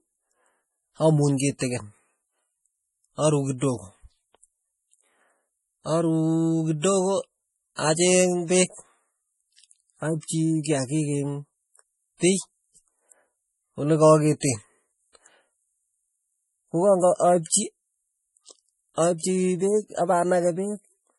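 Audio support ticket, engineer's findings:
Whole clip: speech sounds watery and swirly, nothing above 11.4 kHz, sibilants chirp. Likely MP3 compression at a low bitrate, around 32 kbps by the sound of it. Encoder starving for bits, chopping the top band and flickering weak lines between frames.

Pre-echo: short hiss just ahead of attacks at 1.37–1.40 s, 1.59–1.61 s, 14.40–14.43 s and 17.16–17.20 s, each about 22–35 ms. Transform codec smearing the quantisation noise across the block, so the noise meant for the loud onset leaks into the quiet before it.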